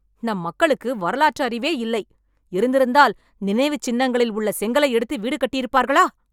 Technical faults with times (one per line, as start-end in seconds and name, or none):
none